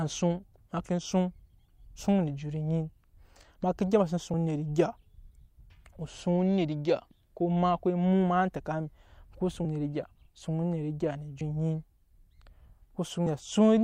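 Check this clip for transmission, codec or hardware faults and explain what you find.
There are compressed frames skipped in this speech, four times: at about 4.34 s, 9.65 s, 11.41 s and 13.26 s. Whole frames never got played, so the audio jumps forward by roughly 100 ms, 70 ms, 150 ms and 70 ms respectively, which fits a frame length of 32 ms. At each join a small chunk of speech is simply gone.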